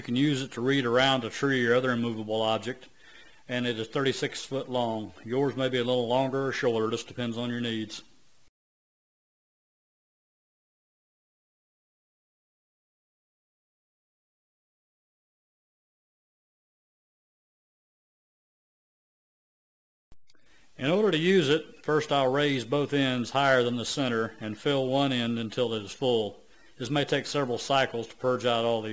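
The top end of this audio sounds gritty and metallic throughout, with a harsh, brittle edge on bright sounds and energy that stops abruptly at about 8 kHz. This is aliasing. The sample rate was lowered without first filtering out content above the new limit, which fits a drop from 44.1 kHz to 16 kHz. Everything above 8 kHz folded back into the band as unrelated tones, sitting roughly 25 dB below the main signal.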